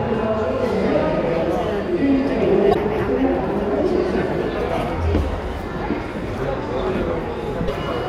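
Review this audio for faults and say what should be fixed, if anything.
There are two short bursts of damaged data in a compressed stream, at 2.71 to 2.76 s and again at 7.64 to 7.70 s, each lasting around 56 ms. In both spots some of the encoded bytes went bad, so the decoder couldn't read those frames cleanly, lost its place and had to hunt for the next valid frame header, which is what causes the brief glitches you hear. To prevent it, move the file over a checksummed transfer and confirm the stream's integrity before decoding.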